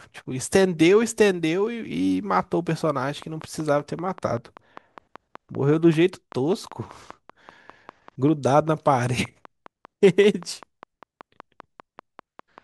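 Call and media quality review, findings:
Train of clicks, 3.03 s to 12.59 s. Regular ticking at 5.13 clicks per second, around fifty clicks in all, peaking roughly level with the speech and audible through pauses. Likely cause is interference from nearby equipment or a faulty connection or power supply injecting a repeated pulse. Spectrogram shows evenly spaced thin vertical broadband lines. Waveform shows near-identical narrow spikes at fixed spacing.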